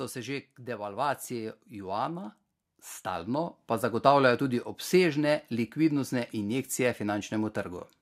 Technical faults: automatic gain rising

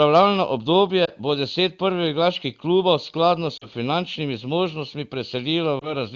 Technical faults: lost AMR speech frames

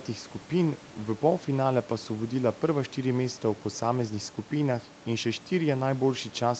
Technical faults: none

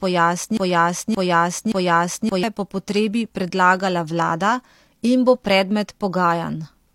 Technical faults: broken-record loop

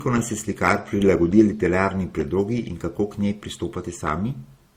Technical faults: transcoding between lossy codecs

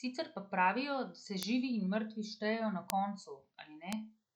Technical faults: bit error spike

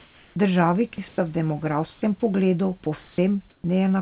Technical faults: comfort noise in place of the background; sound dropped by the voice detector; sound chopped by the voice detector

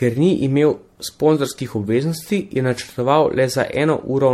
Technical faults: generation loss

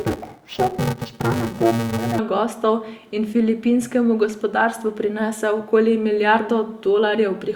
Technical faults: interleaved audio read as planar

